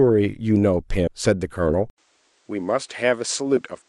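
Speech runs along cleanly until 1.07 s, where the audio jumps forward by roughly 150 ms. This is compressed frames being skipped: whole blocks of encoded audio, around five of them, which fits frames of about 32 ms, were missing or rejected by the decoder. At 1.9 s the sound drops out for 80 ms, then returns duller and boxier, with nothing above 9.7 kHz. It is about 5 dB quieter and carries a new noise floor roughly 40 dB below the speech, and it stays that way to the end. The likely cause is the input being switched to a poorer device mid-recording, one with a narrower band, its own tone and its own background noise.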